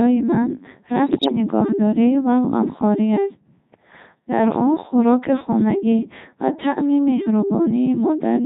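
Right from the start the whole clip runs through a Codec 2 vocoder, and it sounds heavily damaged: robotic and buzzy, even at its top rate of 3.2 kbit/s. Only pitch, voicing, level and a spectral envelope survive, and the decoder rebuilds the speech from sine waves, so the original waveform is gone.

Then from 1.06 to 1.32 s there's a burst of bit errors on digital voice radio. At a very low bitrate every flipped bit hits the pitch, loudness or tone of a whole frame, so the synthetic speech lurches and warbles into bleepy gibberish. The damage spans roughly a dozen frames and suggests something like one bit in fifteen going wrong.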